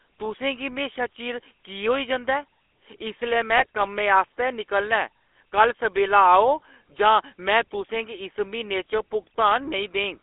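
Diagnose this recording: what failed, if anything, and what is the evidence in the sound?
The speech passed through a GSM full-rate codec, a codec-stage fault present for the whole clip. This vocoder models the vocal tract and excites it with a sparse pulse train, discarding most of the excitation detail, which fits a 13 kbps full-rate coder. The result is a plainly audible buzzy, gravelly roughness on every voiced stretch, and the sound sits in a telephone band of roughly 300 Hz to 3.4 kHz, with nothing above that.

GSM bit errors, a radio-link fault, strike from 3.57 to 3.66 s. Corrupted bits reached the decoder, and wrong filter, pitch or gain parameters distort the spectrum or spike the level frame by frame. Here that is heard as a brief burst of squawking, popping and gargling lasting under a tenth of a second. The length points to a handful of damaged 20 ms frames on a link with an error rate around one percent.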